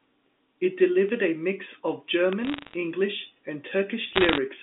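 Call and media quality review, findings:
Bit error spikes: single sharp ticks at 1.09 s, 2.33 s and 4.02 s, broadband and unrelated to the speech. Probably a memory or digital-link fault upstream of playback. A flipped bit throws one sample, or two or three in a row, off by a power of two, and it snaps straight back, so you get a click rather than a burst. Worth checking buffer integrity on that hop.

Bit errors on a digital phone line: crackle from 2.45 to 2.74 s and again from 4.13 to 4.38 s, sitting over speech that stays intact underneath. The cause is on the G.711 trunk, which carries the 200 Hz to 3.6 kHz phone band cleanly. Each flipped bit corrupts one sample, and hits on the sign or high bits pop. Error rate runs around half a percent in the first stretch and roughly one percent in the second.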